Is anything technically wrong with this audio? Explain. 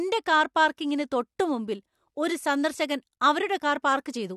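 Yes, there's a pre-echo at about 0.77 s, just before "തൊട്ടുമുമ്പിൽ ഒരു സന്ദർശകൻ". A brief hiss of roughly 12 ms creeps in ahead of a sharp onset. The transform codec coded that attack late in its block and spread the quantisation noise across the whole block. So noise sized for the loud burst bleeds into the quiet gap just before it, and the attack itself lands blurred and soft instead of crisp.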